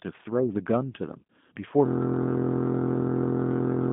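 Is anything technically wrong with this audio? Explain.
Yes. Two faults are present.

G.729 codec: Throughout the clip, the speech has passed through a low-rate voice codec, consistent with 8 kbit/s G.729A. That codec discards the waveform and resynthesises each short frame from a vocal-tract filter, a pitch predictor and a few excitation pulses, on a line band of about 150 Hz to 3.6 kHz. Nothing is present above 3.8 kHz, so the speech sounds muffled and narrow, and the coding damage is plainly audible as a rough, buzzy, synthetic texture.

System hang loop: From 1.86 s to the end of the clip, the system froze while the audio hardware kept replaying the same ring buffer. A single 23.22 ms slice, which fits a 1024-sample buffer, repeats about ninety times. Because the segment is so short, it sounds like a steady, mechanical buzz at 43.1 Hz rather than a stutter. The buzz replaces the rest of the speech until the clip stops.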